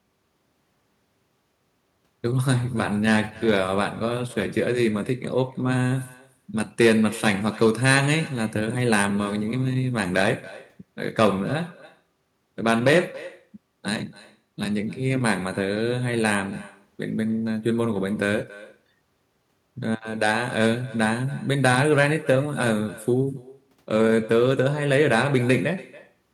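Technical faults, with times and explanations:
Throughout, echo with no canceller: the speech returns about a third of a second later, thin, roughly 21 dB down, a delayed copy rather than smeared reverberation.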